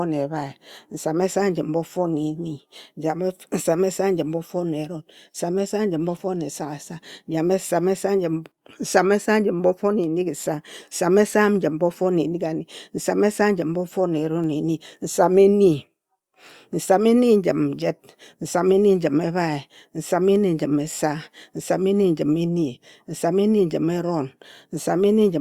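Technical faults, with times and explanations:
No technical faults detected.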